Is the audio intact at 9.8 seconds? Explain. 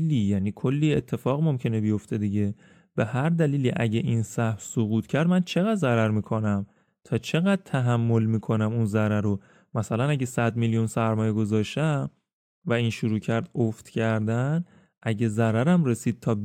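Yes, at 9.8 seconds the speech plays through cleanly, with no dropout, click, distortion or other fault to be heard at that moment.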